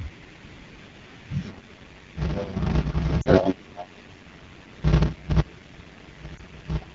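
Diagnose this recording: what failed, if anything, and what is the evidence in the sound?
Rough, raspy speech throughout points to the codec stage: AMR wideband (HD Voice) coding at a low rate, which fits the 8.85 kbit/s mode.

From 1.41 s to the end, a 93.8 Hz buzz appears and the speech slows to 0.625 speed at about normal pitch. This is a buffer-stage block size mismatch (padded), consistent with zero-filled 512-sample blocks.

At 3.22 to 3.28 s and 6.38 to 6.41 s, brief warbling dips mark network-stage lost AMR speech frames. The decoder bridges each gap with fading, repeated settings.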